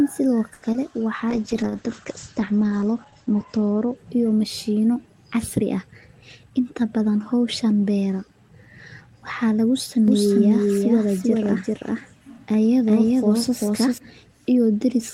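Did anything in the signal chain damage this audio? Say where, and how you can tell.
Yes. The damage comes from the network and jitter-buffer stages of a voice call, plus one mixing fault later in the clip.

Network and buffer: from 0.53 to 0.64 s there is a short stall from a late packet. The last sound is held for 90 ms and then resumes from the same point with nothing lost. A packet arrived late, the jitter buffer ran dry, and the receiver stretched the audio it already had. Overall delay grew by 90 ms.

Network and decoder: from 0.72 to 0.76 s there is a short concealed packet loss. About 20 ms of real audio is missing. The decoder filled the gap by extrapolating the preceding sound and then blending back in, which leaves a brief smear in the speech. Unlike the stall before it, this audio was never received, so that moment is gone rather than delayed.

Codec: a call bitrate drop runs from 1.32 to 4.96 s and ends just before "casri ah". 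The encoder was pushed from 32 kbps down to 10 kbps and stayed at the lowest rate for about 1.6 s. Audio bandwidth shrank from 20 kHz to 8 kHz, so the speech turns muffled and coarse, having lost its top octave and fine detail, until the rate recovers.

Jitter buffer: between "casri ah" and "inta badan howshan", from 5.94 to 6.51 s, there is a jitter buffer speed-up. The buffer had built up excess delay and trimmed it by cutting out pitch-period slices. In total it removed roughly a tenth of a second. The speech plays at about 114% speed with unchanged pitch, so that phrase sounds rushed.

Capture or mixing: a doubled audio track starts right after "waxa lagu" at 10.08 s and runs until 13.98 s. A second, equally loud, full-band copy trails the original by roughly 0.4 s. It has no reverberant tail, and it starts and stops abruptly, so it is not room echo. The likely cause is the same signal being mixed in again through a slower parallel path.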